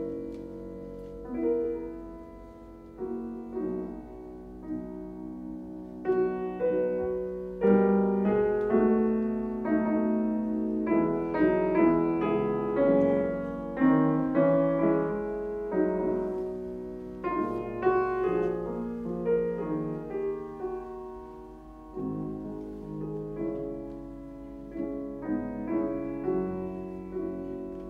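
No technical faults are audible.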